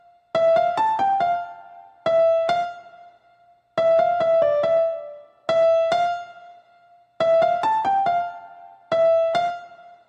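No technical faults can be heard anywhere in this recording of sound. Nothing in the audio breaks, stalls or changes character at any point.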